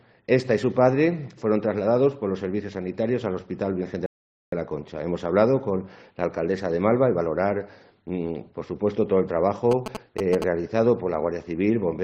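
A rebuffering stall from 4.06 to 4.52 s: playback ran dry, fell silent for about 460 ms, then resumed exactly where it stopped, adding time without losing any sound. GSM signalling bursts from 9.71 to 10.44 s: a nearby 2G phone's radio pulses, rectified by the audio circuit, give a galloping dit-dit-dit of short 217 Hz buzzes, loud, only slightly below the main sound.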